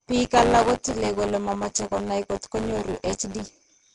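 Buffer tearing runs through the whole clip: a steady 100 Hz rattle rides on the speech, as a small slice of each buffer repeats audio roughly 20 ms stale, with hard joins.

Throughout, the speech also carries a rough, hissy haze and a smeared, underwater quality, with nothing above 10.6 kHz. The likely cause is Nellymoser compression, starving weak bands and filling them with noise.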